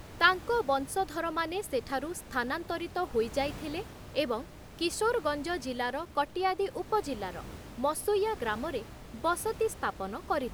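There are no technical faults to describe in time order anywhere in this speech.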